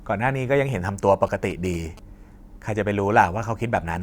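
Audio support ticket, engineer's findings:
GSM signalling bursts, 1.27 to 1.99 s. Galloping dit-dit-dit ticks with short buzzes at about 217 Hz, roughly 20 dB under the speech. Probable source: a 2G handset near the mic or cable, in its signalling phase. Mechanism: the RF bursts get rectified in the input stage and come out as audible buzz at the burst rate. Fix: move the phone away, add shielding or filtering.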